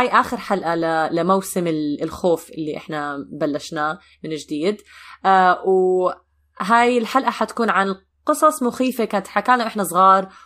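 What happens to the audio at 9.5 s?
Nothing goes wrong at 9.5 s: the speech carries on intact there, with no dropout, click or distortion.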